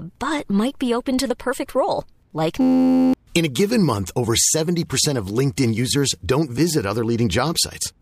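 At 2.61 s, just after "the perfect role like", a system hang loop replaces the speech until 3.14 s: an 11.61 ms slice repeats 45 times, which fits a 512-sample buffer, producing a steady 86.1 Hz buzz while about half a second of audio is lost.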